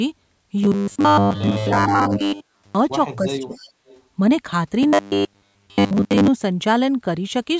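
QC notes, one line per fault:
2.15 to 2.2 s, 3.54 to 3.71 s and 3.87 to 4.02 s, echo leak: faint copies of the talker trail 289 ms behind, roughly 20 to 30 dB down, likely the far end's echo canceller letting loudspeaker pickup slip through.
3.25 to 3.54 s, speech suppressed in double talk: the voice dips hard, around 25 dB at worst, for about a fifth of a second, likely the canceller ducking everything while both sides talked.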